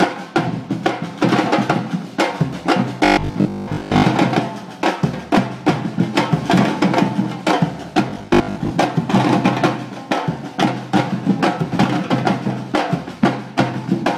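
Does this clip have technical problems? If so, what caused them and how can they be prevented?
Yes. Robotic sound from repeated short buffers appears from 3.05 to 4.05 s and again from 8.10 to 8.72 s. The sound turns into a rigid 50 Hz buzz, likely because audio arrived too late and the last 20 ms block was replayed in place of missing material. That replay fills most of the first stretch and about half of the second. On a waveform, identical 20 ms cycles repeat, and a spectrogram shows evenly spaced harmonic lines every 50 Hz. Larger jitter buffers and a steady processing load prevent this.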